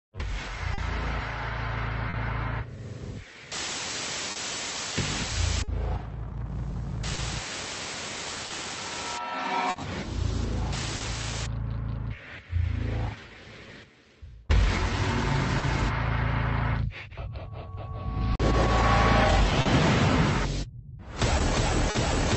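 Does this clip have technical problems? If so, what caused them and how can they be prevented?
Yes. There is a faint, uneven unsteadiness in tempo throughout, caused by clock drift between sender and receiver: the sender's clock runs roughly 3% slower than the receiver's, so the jitter buffer keeps draining. Locking both ends to a common clock or using a better drift compensator would prevent it.

From 0.02 to 21.01 s, repeated timing corrections play the audio at about 99% speed, adding roughly 200 ms overall. These small, irregularly spaced stretches keep the receiver in step with the slower sender. Adaptive resampling instead of piecewise stretching would hide them better.

Short stalls from a late packet appear as brief held or buzzy sounds at 0.74, 2.10, 18.36, 19.61 and 21.91 s, each 40 ms, and at 15.58 s for 50 ms. Each time the buffer ran empty and the last sound was extended until data arrived, so nothing is missing. 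A slightly deeper jitter buffer would absorb these delays.

Between 4.32 and 11.02 s, scattered short gaps cause about seven tiny ticks or smears, the longest around 40 ms. Each was patched by continuing the previous sound, about 200 ms in all. Reducing network loss or enabling forward error correction would prevent them.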